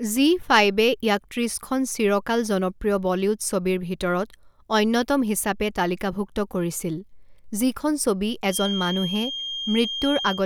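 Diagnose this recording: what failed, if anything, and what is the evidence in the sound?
Feedback whistle from 8.46 s to the end of the clip: a thin, steady 3.2 kHz tone sits roughly 10 dB below the speech, swelling and fading slowly in level. The likely cause is the loudspeaker-to-microphone acoustic loop hovering at the edge of instability, sustaining that one frequency without escalating.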